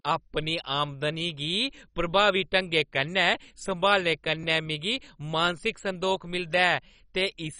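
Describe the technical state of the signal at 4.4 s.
At 4.43 s, just before "मिगी मानसिक संदोख", there is a jump where the audio skips forward, most likely a dropped buffer (overrun). Only a millisecond or two of sound is lost and the two edges are butted together. Unlike a dropout, no silent gap opens up.

The whole clip, including this moment, carries heavy MP2 compression damage. There is nothing above 10.4 kHz, with dull, gurgling, granular texture as upper sub-bands switch off and coarse quantisation remains, which fits a very low rate around 32 kbps. It differs from simple low-pass filtering through that flickering, watery grit.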